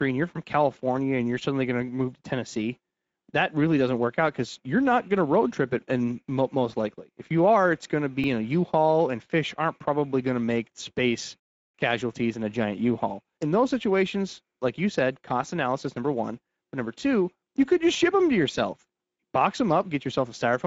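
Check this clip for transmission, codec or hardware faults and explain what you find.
Two faults are present: Speex codec damage across the whole clip, and one repeated buffer.

Speex codec runs from start to finish. The speech sounds noisy and hoarse, and the damage is plainly audible. It fits a setting near 16.8 kbps. This CELP coder gives the excitation too few bits. The band above 4 kHz is only shaped, noise-like fill. Nothing remains above 7.7 kHz.

A repeated buffer occurs at 8.24 s, right after "are it's going to". New audio arrived late, so the device replayed its last buffer. A piece about 2.67 ms long sounds three times, with a hard join at each repeat. That fits a 128-sample buffer. It is heard as a brief click or buzz. Almost no audio is lost.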